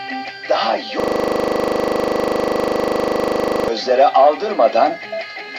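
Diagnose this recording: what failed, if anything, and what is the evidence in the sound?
The fault is a system hang loop at the driver or buffer stage. From 1.0 s to 3.68 s, one 40 ms slice of sound repeats exactly, about 67 times. That gives a rough, buzzing stutter at 25 Hz. The host or driver stalled while the sound hardware kept replaying the same ring buffer. The loop length fits a buffer of about 40 ms. When playback resumes, roughly three seconds of the original sound is gone.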